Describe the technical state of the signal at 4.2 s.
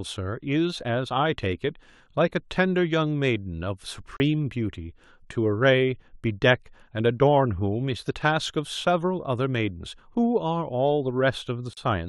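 A short hole sits just before 4.2 s: a block of digital silence from 4.17 to 4.20 s, about 33 ms long. The speech drops abruptly to silence and returns without any fade, which points to an output buffer that was not filled in time.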